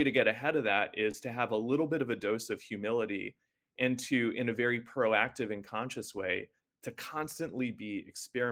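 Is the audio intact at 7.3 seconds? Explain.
Yes, at 7.3 seconds the speech plays through intact, with no dropout, click or other technical fault at that moment.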